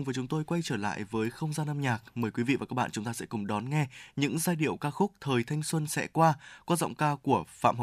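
No technical faults are audible.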